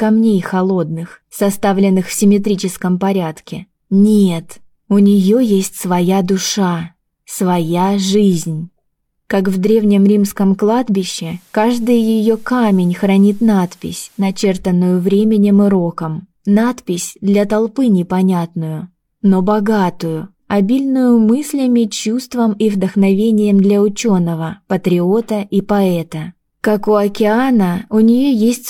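From 10.97 to 14.48 s, faint hiss rises: digital radio blending to analogue, a 0.34 s cross-fade to FM and back.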